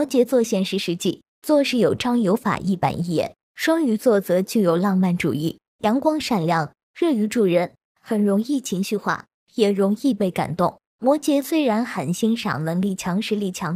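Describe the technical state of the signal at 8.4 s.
At 8.4 s the signal is intact, with no dropout, distortion, glitch or other fault audible at that point.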